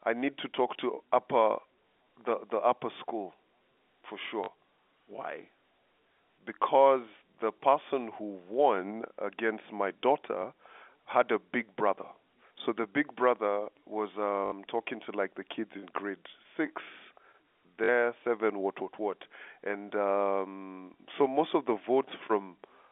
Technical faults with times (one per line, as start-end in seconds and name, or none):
4.44-4.48 packet loss with last packet repeated
10.42 packet loss with last packet repeated
14.46-14.52 packet loss with last packet repeated
17.84-17.88 packet loss with last packet repeated
20.94 packet loss with last packet repeated